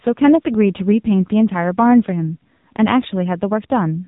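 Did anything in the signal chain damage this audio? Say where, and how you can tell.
Yes: AMR narrowband mobile codec damage at the codec stage, throughout. Nothing passes above 3.8 kHz, and the buzzy, synthetic voicing points to a low rate near 6.7 kbps, unlike a plain low-pass filter.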